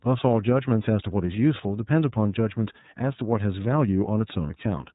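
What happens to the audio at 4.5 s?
Lost iLBC frames from 4.47 to 4.51 s: a packet drops out, a gap consistent with a single 30 ms frame, and the decoder fills it by repeating the last pitch cycle blended with noise. This sounds like a brief held, faintly buzzy vowel, and the voice is right again almost at once afterward because each iLBC frame decodes independently.

The iLBC codec runs through the whole clip, so this moment is also narrowband: nothing above 4 kHz survives. Its coding damage is plainly audible as a rough, slightly synthetic quality, consistent with iLBC's 30 ms frame mode at 13.33 kbps.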